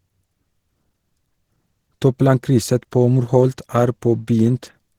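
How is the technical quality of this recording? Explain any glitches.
The recording has plainly audible codec damage throughout the speech. From start to end, this is likely Opus compression in hybrid mode at a low rate, fitting roughly 16 kbps. Bands short of bits are filled with folded or noise-like content, so the sound turns grainy and hoarse rather than swirling like MP3.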